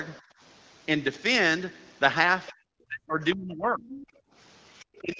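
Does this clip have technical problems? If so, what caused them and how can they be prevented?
Yes. Background gated by the echo canceller, 0.22 to 0.40 s and 4.21 to 4.34 s: while the loudspeaker played, the canceller turned the microphone down, dropping room sound by about 21 dB and about 27 dB. Prevent it by using a canceller with gentler suppression and comfort noise instead of hard gating.

Other side's voice leaking through, 2.47 to 2.53 s, 3.87 to 4.07 s and 4.96 to 5.00 s: a faint second voice, about 20, 15 and 30 dB below the talker, likely loudspeaker echo that the canceller did not fully remove. Prevent it by using a headset or lowering loudspeaker volume so less echo reaches the microphone.

Speech suppressed in double talk, 2.88 to 3.93 s and 5.01 s to the end: the talker's voice dips sharply, around 35 dB at worst, then by roughly 25 dB, while the other side speaks, likely because the canceller treated both as echo. 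Prevent it with headsets on both ends or a canceller with better double-talk detection.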